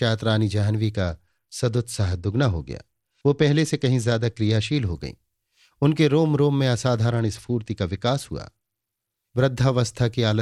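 Speech carrying a Bluetooth SBC bit pool drop from 0.94 to 4.93 s and again from 7.10 to 9.17 s: treble dulls and gritty quantisation noise rises, fitting a bit pool cut from 28 to 11, near 90 kbps. Unlike a fixed low-bitrate encode, quality recovers between drops.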